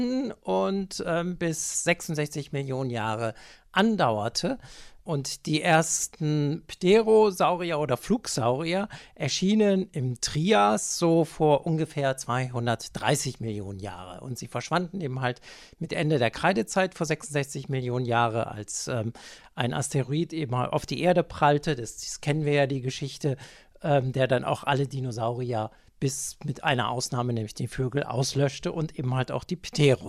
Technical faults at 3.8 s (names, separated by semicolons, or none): hard clipping